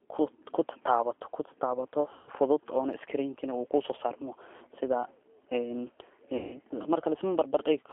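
Throughout, a G.729 codec at 8 kbit/s rebuilds each frame from a filter and sparse pulses within a 300 Hz to 3.4 kHz band, leaving the speech thin, rough and slightly synthetic. From 2.13 to 2.30 s and again from 6.37 to 6.59 s, VoIP packet loss is concealed by the speech codec. About 140 ms and then 160 ms of packets go missing, and the decoder extends its last pitch and filter into a fading buzzy tone or coloured noise. The speech stays weak or distorted briefly after each gap.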